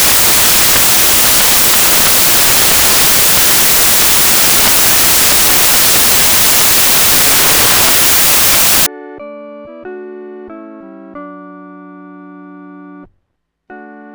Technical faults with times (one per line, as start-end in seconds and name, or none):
0.00-8.86 samples built from the wrong bytes